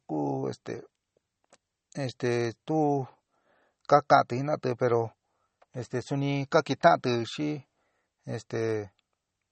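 From start to finish, the speech carries plainly audible MP3 compression damage, likely from a very low bitrate around 32 kbps. Nothing is heard above 8.4 kHz. Weak frequency lines drop in and out between frames. The result sounds watery and swirly, with smeared consonants.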